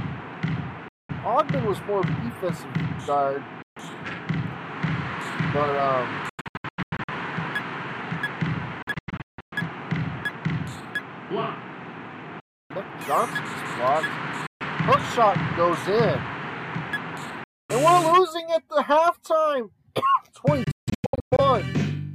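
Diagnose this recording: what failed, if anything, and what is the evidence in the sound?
The wireless playback link failed repeatedly, most likely a Bluetooth dropout where packets missed their deadline and were discarded. The sound cuts abruptly to silence at 0.88–1.11, 3.62–3.78, 12.40–12.72, 14.47–14.62 and 17.44–17.71 s, with holes of 140 to 300 ms. Around 6.29–7.09, 8.82–9.53 and 20.64–21.40 s it stutters through clusters of short gaps instead. Each time it resumes further along, as though it had kept playing unheard.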